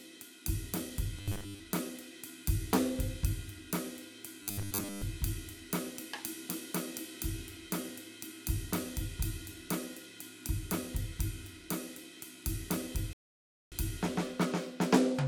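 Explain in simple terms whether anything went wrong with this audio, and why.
Two problems can be heard in this music. From 1.19 to 1.60 s and again from 4.43 to 5.02 s, there is robotic sound from repeated short buffers. The music turns into a stiff, metallic buzz at 100 Hz. New audio was likely arriving too slowly, so tiny 10 ms slices were replayed over and over to fill the gaps. Most of the real music in those stretches was skipped.

At 13.13 s there is a rebuffering stall. The player ran out of downloaded audio and went silent until more arrived. The music picks up at 13.72 s exactly where it stopped. Nothing is lost, but the pause adds about 0.59 s.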